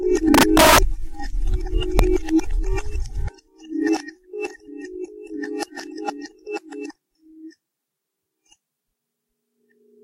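Violent, splintering cracks hit the loud parts of the sound from 0.34 to 0.78 s, far harsher than ordinary clipping, and a single sharp crack follows at 1.99 s. This is integer overflow. The signal was driven about 9 dB past the largest value the integer format can hold in the first stretch, and only just reached that limit at 1.99 s. Instead of being held at full scale, each peak wrapped around to the opposite extreme.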